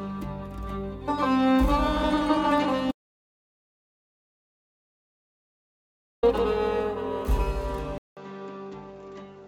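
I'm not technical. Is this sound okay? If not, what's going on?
No. From 2.92 s to 6.23 s the music cuts out completely, an audio dropout to silence lasting about 3.3 seconds. That stretch is total silence with no background at all, most likely because the input was briefly lost while recording continued.

At 7.98 s there is a short silence of about 0.19 s, then the music returns duller, a little quieter and with a faint new background noise, with nothing above 7.6 kHz. That points to the input being switched to a poorer device, likely a lower-quality microphone or headset.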